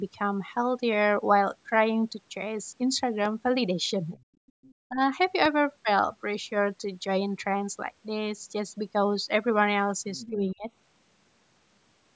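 At 3.25 to 3.28 s, a voltage spike, likely from a plug, a switch or a driver glitch, landed on the signal as a loud pop. It is heard as a single sharp pop standing about 5 dB above the speech, which continues beneath it.

From 4.10 to 4.23 s, the echo canceller likely failed to fully remove the far end's loudspeaker sound from the microphone, so the other side's voice leaks through. It is a faint fragment sitting about 25 dB under the talker.

From 4.34 to 4.63 s, both sides talking at once likely confused the echo canceller, which turned everything down. This is speech suppressed in double talk: the talker's voice dips sharply, by as much as about 40 dB.

From 4.47 to 4.74 s, overlapping that dip, the far-end voice leaks through again, likely from the same incomplete echo removal, about 30 dB below the speech.

From 4.88 to 5.01 s, the canceller likely clamped down a second time during overlap, pulling the voice down by about 20 dB.

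At 5.45 to 5.48 s, another pulse, likely electrical, produces a second loud pop, about 10 dB above the signal.

At 10.17 to 10.31 s, the other side's voice leaks through once more, likely from residual echo, at about 20 dB below the talker.

From 10.30 to 10.65 s, double-talk suppression, likely triggered by that overlap, dips the speech by about 25 dB. Throughout the clip, the call microphone processing has trimmed the lowest bass, and nothing is present above 8 kHz.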